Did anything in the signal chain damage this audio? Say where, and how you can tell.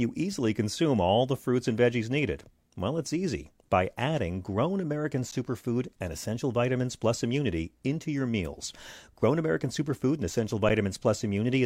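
Yes. Underrun with held sample at the driver or buffer stage, at 5.31 s and 10.69 s. The waveform sits flat for about 11 ms each time, the first fitting a 512-sample buffer running dry, a thin blank strip on a spectrogram. Playback resumes where it stopped, so joins are soft.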